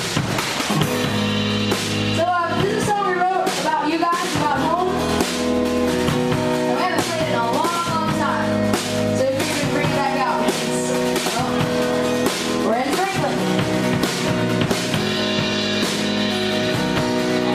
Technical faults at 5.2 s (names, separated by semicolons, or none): none